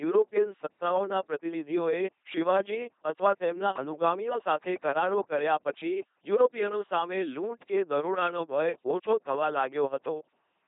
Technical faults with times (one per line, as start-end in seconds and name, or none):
0.00-10.67 LPC-10 vocoder